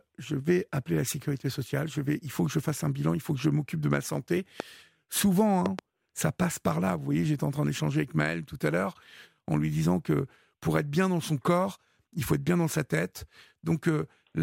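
A sudden voltage pulse, likely from a plug, switch, static discharge or driver glitch, enters the signal path twice, producing loud pops in the speech. The first, from 4.60 to 4.62 s, is a single sharp pop. The second, from 5.66 to 5.81 s, is a pair of pops in quick succession. Both peak roughly 15 dB above the speech, briefly shaped by the following circuitry, while the speech continues underneath.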